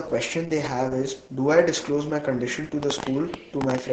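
Opus voice compression runs throughout, coding the speech at what sounds like about 10 kbps with the SILK coder. With nothing above 9.2 kHz, it comes out muffled, hoarse and slightly robotic. From 2.83 s to the end, a train of clicks, likely from electrical interference or a struggling interface, adds around fifteen irregular pops, about 11.5 per second and roughly 15 dB above the speech.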